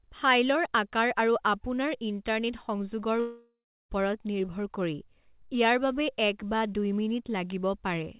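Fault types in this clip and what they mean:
Long network dropout: The speech cuts out at 3.2 s and returns at 3.91 s, with about 0.7 s lost. A fading buzz or hiss extends the last sound, then 0.32 s of silence follows. Packets likely stopped arriving over the 4 kHz-limited call path.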